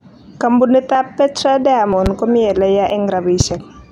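At 0.95 s the speech skips. This is audio missing between chunks. A sliver of roughly 30 ms is gone, and the two sides butt together with no gap. The cause is likely a recorder or processor working in 1 s chunks and dropping a piece at each handover. The same skip returns at 1.93 s, just before "komi eleya". It comes again at 2.90 s, right after "komi eleya". The steady 1 s spacing gives it away.

At 2.06 s a loud pop sits on top of the speech, just before "komi eleya". It is a single sharp hit, about 10 dB above the speech, lasting about 25 ms. The speech carries on underneath. A sudden voltage step is the likely source, such as a plug, a switch or static. At 3.40 s two pops follow in quick succession, spread over about 0.13 s. They are again about 10 dB above the speech.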